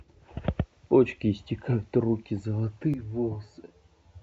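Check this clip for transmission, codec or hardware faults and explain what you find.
One fault is present: channel delay (comb filtering) from 2.94 s to the end of the speech. One channel arrives roughly 10 ms late, and when the two are summed to mono, the shared content cancels at evenly spaced frequencies. The lowest notch sits somewhere around 40 Hz, with more at regular steps above it. The result sounds hollow and phasey. Because a 10 ms offset is too short to be heard as a separate repeat, it does not sound like an echo. The notches also stay fixed, unlike the shifting swirl of codec artefacts.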